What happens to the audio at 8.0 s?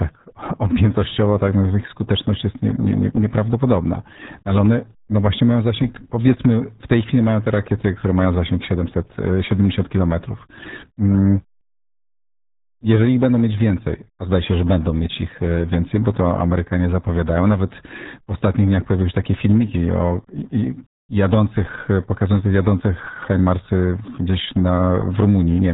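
At 8.0 s the speech carries the RealAudio 14.4 codec damage heard across the whole clip. This dial-up era speech coder squeezes the voice into a tiny data budget, consistent with roughly 8 kbit/s, by modelling it crudely and discarding the upper band, so nothing above 3.8 kHz survives. The result at that moment is heavily muffled, gargly speech with no crisp consonant edges.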